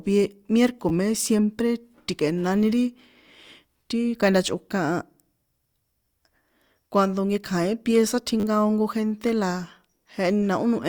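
When new audio twice failed to arrive in time, the device replayed its last buffer, a repeated buffer fault. Near 0.9 s, before "me siempre ti̱kꞌe̱nani ri", a tiny slice plays three times. At 8.4 s, before "ko gente", it plays five times. The slices fit a 10 ms buffer, so each repeat comes across as a brief click-like buzz rather than a stutter.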